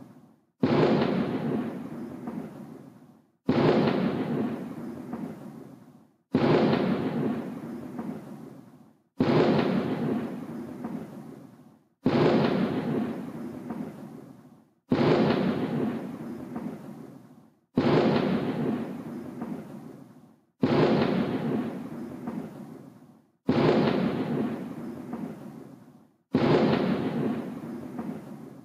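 Gain pumping runs through the whole recording of sounds. The level dips under each loud sound and recovers after it, a swing of around 5 dB. Loud and soft parts sit closer together. The likely cause is gain set too high, with a fast limiter or compressor pulling it back down.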